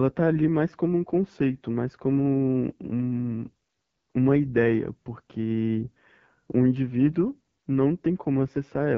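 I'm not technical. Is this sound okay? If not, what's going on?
No. The speech sounds rough and raspy throughout, from the AMR wideband (HD Voice) codec squeezing it into too little data to keep it clean.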